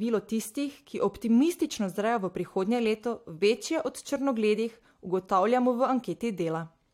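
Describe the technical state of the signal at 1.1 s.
At 1.1 s the speech signal is intact, with no dropout, clipping, glitch or other fault at that moment.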